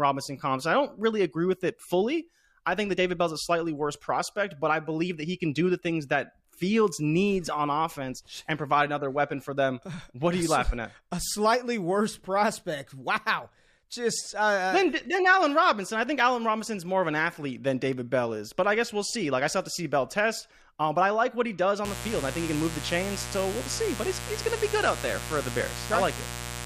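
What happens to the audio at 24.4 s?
A mains buzz is running there: switching spikes from a dimmer, rectifier or unshielded line are leaking in twice per 60 Hz cycle, from 21.85 s, just after "like what he does", to the end. Their harmonics climb into the kilohertz range, laying a steady, raspy buzz only about 10 dB below the speech.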